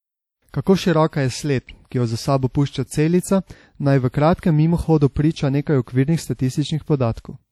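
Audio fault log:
Throughout, WMA compression: the speech sounds plainly ringy and washy, with hiss pumping along, likely a long-block transform codec whose smearing fits about 48 kbps.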